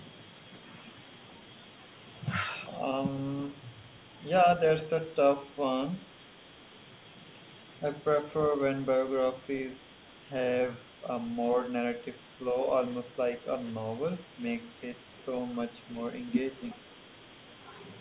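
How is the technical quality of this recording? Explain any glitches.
Technical quality is compromised by two brief glitches near the end of the clip, both around 16.7 s. The speech is band-limited to about 4 kHz, which fits a narrowband G.711 call path, and that dull, telephone-like top end runs through the whole recording.

Echo leak, 16.70 to 16.76 s: a faint, delayed copy of the speech slips through for about 60 ms, lagging the original by about 363 ms and sitting roughly 25 dB below it. The likely cause is that the far end was on a loudspeaker and its echo canceller did not fully remove what its microphone picked up, so the residue returned down the line. The long, fixed delay sets it apart from room reverberation, which would trail smoothly and immediately behind the sound.

Speech suppressed in double talk, 16.74 to 16.82 s: overlapping the echo, the speech level dips sharply, by around 15 dB at its deepest, over roughly 70 ms. 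This likely happened because the echo canceller could not separate the local talker from the loudspeaker signal while both were active and turned everything down. It differs from a packet-loss dropout because the level is ducked rather than replaced by silence or a synthetic fill, and it overlaps the echo.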